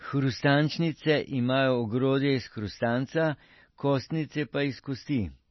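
Throughout the speech the sound is dull and watery, with nothing at all above about 5.9 kHz, so s sounds lose their edge and turn into swirly, metallic chirps, while consonant attacks blur. The likely cause is heavy MP3 compression at a bitrate that fits roughly 24 kbps. Starved of bits, the encoder cuts the treble at a fixed point and drops weaker frequency lines, which flicker on and off from frame to frame.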